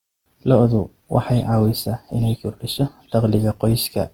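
Across the whole speech clip the sound carries the layered artefacts of transcoding between lossy codecs, most likely a low-rate Opus encode, around 24 kbit/s, later re-encoded with HE-AAC at roughly 48 kbit/s. The second encoder spends its bits reproducing the first one's smearing and adds its own swirly, metallic texture, so both are heard at once. A spectrogram shows nothing above 20.4 kHz, with blotchy, patchy upper bands where the two codecs' quantisation overlaps.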